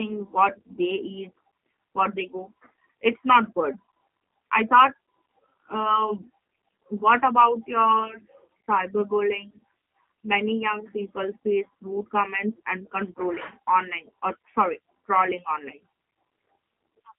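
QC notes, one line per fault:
Throughout: G.729 codec. Nothing reaches above about 3.8 kHz, and the band sits roughly between 150 Hz and 3.4 kHz, a telephone line band. The roughness points to an 8 kbit/s coder of the G.729A type. It rebuilds the speech from a vocal tract filter, a pitch predictor and a few coded pulses in each 10 ms frame instead of carrying the waveform itself. That is why the codec damage is plainly audible as a slightly rough, synthetic edge on the speech.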